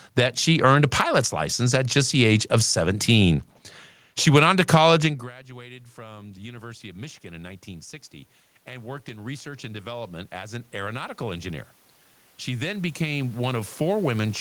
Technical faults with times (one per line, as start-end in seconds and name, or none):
5.47-7.98 automatic gain rising
8.65-11.67 automatic gain rising
12.24-14.40 automatic gain rising